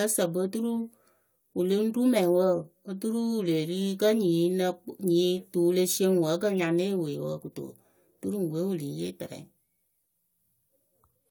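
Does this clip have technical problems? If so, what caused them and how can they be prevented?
No, the speech signal shows no audible technical faults anywhere in the clip.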